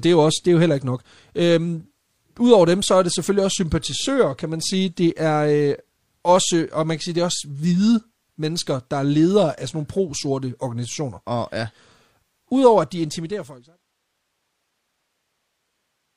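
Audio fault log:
The speech signal carries no audible technical faults, and its level tapers gradually from around 12.5 s to silence at 13.83 s in an even editorial fade-out.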